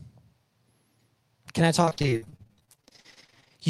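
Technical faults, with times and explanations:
1.81 to 3.52 s, repeated packet loss (robotic sound): the speech breaks up into rapid short holes, the longest around 55 ms, each patched by stretching the last bit of sound forward. With nearly half that stretch concealed, it turns choppy, with pieces missing.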